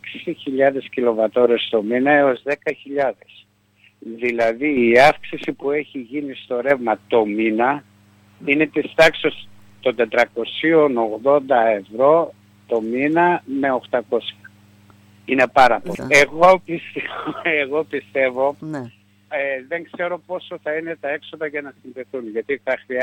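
At 2.37 s the level falls abruptly by about 6 dB, recovering at 4.77 s. The same drop recurs from 5.53 to 6.70 s, and from 18.61 s to the end. The likely cause is one channel dropping out, halving the shared signal in the mono sum.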